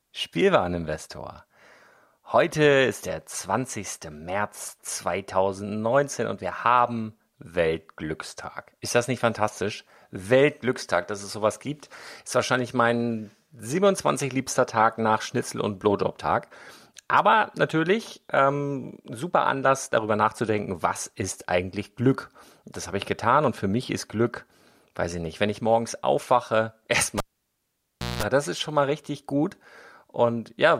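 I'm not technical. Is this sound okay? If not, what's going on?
No. At 27.18 s, a cable pulled and plugged in: pop, one second of near silence, a brief 60 Hz mains buzz, then a pop before "das ist schon mal".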